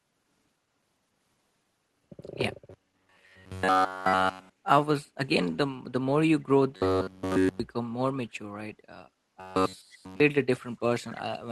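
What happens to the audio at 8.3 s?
Nothing goes wrong at 8.3 s: the speech carries straight through that moment with no dropout, glitch or distortion, just the ordinary sound of the call path it was sent over.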